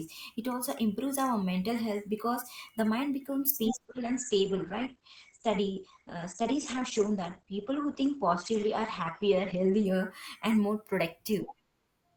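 From 3.85 to 9.85 s, after "because the mind becomes", the speech jumps without any gap to an adaptive stream at a lower bitrate. Everything above 8.5 kHz is gone until "and more". Unlike a dropout, nothing goes silent; only the quality drops suddenly.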